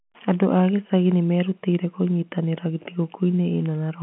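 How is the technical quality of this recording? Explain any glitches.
No glitches to explain: the speech is confined to a telephone band of about 150 Hz to 3.4 kHz, consistent with ordinary G.711 A-law line coding, and nothing faulty is heard.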